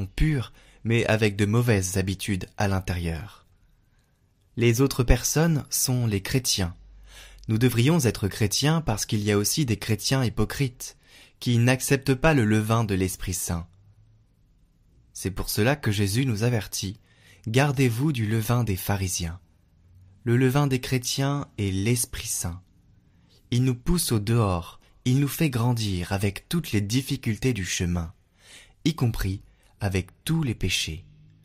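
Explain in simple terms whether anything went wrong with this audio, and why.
Nothing went wrong here.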